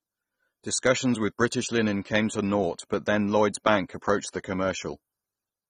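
Throughout, the speech sounds dull and smeared, with warbling, fizzy sibilants, likely AAC compression at a low bitrate near 24 kbps. Unlike a plain low-pass filter, the highs don't simply stop: bands drop out or return as hissy substitute noise.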